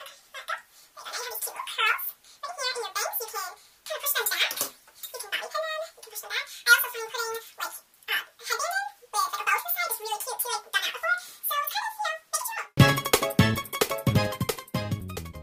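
Throughout, the sound runs twice as fast and a full octave high. That is a wrong sample rate: material captured near 22 kHz is played back unconverted at 44.1 kHz.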